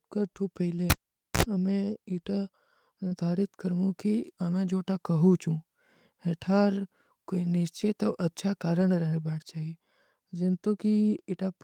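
Speech, with three kinds of network and hardware trouble. At 0.77 s there's a lost packet rebuilt from error correction. A single 20 ms frame went missing and the decoder played the low-bitrate backup copy carried in the next packet, so there's no gap, just a short rough, noisier patch. The same thing happens at 3.11, 7.81 and 8.81 s, each one a lone 20 ms frame with that grainy texture. Right after the first one, from 0.9 to 1.43 s, you hear a cable pulled and plugged in. There's a pop and then near silence for about half a second while the lead is out. Then there's a short burst of 60 Hz mains buzz, roughly 56 ms, as the tip makes contact before the sleeve does. A second pop follows, and the sound comes back just before "ଅମେ ଇତା". Around 3.07 to 3.13 s there's a short concealed packet loss. About 40 ms never arrived in time, so the receiver filled the hole by extending the last bit of sound and then crossfading back into the real audio. 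You get a brief smear or wobble just ahead of "କରମୂ କୀ ଅମେ ଜୋ", and the FEC-rebuilt frame at 3.11 s falls in the tail of that same stretch.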